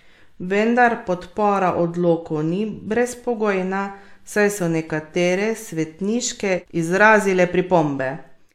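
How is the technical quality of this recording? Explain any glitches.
No glitches or transport faults turn up anywhere in the speech; the signal path holds steady throughout.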